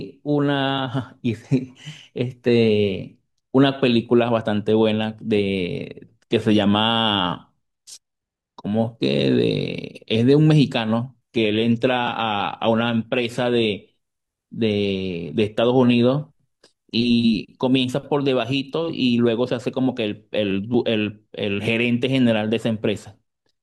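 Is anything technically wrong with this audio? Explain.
Yes. From 11.22 to 17.22 s the adaptive stream switched to a lower bitrate, consistent with a drop to a roughly 24 kbit/s HE-AAC stream. The speech abruptly turns smeared with codec artefacts, then recovers without any gap.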